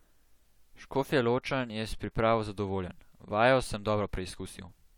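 No technical faults can be heard anywhere in this recording. The speech carries on without any interruption or disturbance that would call for a timed note.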